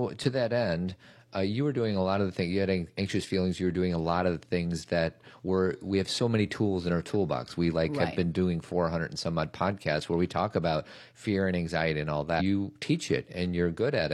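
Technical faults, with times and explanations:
12.36 to 12.41 s, stream segment skipped: likely one segment of the stream failed to load and the player carried on with the next, so the speech jumps abruptly forward across this short blip, with the intervening stretch of the programme simply missing.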